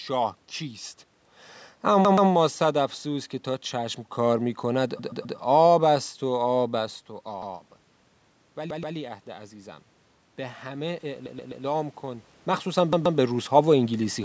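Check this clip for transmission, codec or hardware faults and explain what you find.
Two system faults are audible in the speech: repeated playout buffers and a rising automatic gain.

Repeated buffer, at 2.05, 4.99, 7.42, 8.70, 11.26 and 12.93 s: new audio arrived late, so the device replayed its last 128 ms block, which fits a 2048-sample buffer. Each stall sounds as a hard-edged stutter, with the same fragment heard two, three or four times.

Automatic gain rising, from 8.57 to 13.47 s: the input level fell by about 13 dB and the gain control answered by gradually raising its gain by about 6 dB. Voice and room noise swell together over several seconds, partly offsetting the drop. The shift in the talker's position around 12 s is separate from this.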